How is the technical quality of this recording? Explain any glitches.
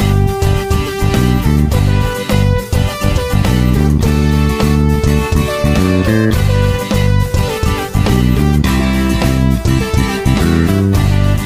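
No glitches can be heard in this recording. There is nothing in it that calls for an explanation.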